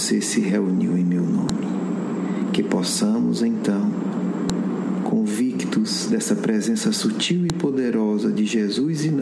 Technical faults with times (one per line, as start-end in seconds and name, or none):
1.49 file header played as audio
4.50 file header played as audio
7.50 file header played as audio